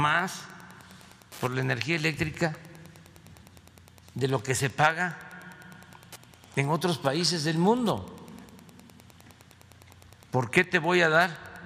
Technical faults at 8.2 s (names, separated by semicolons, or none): Wi-Fi interference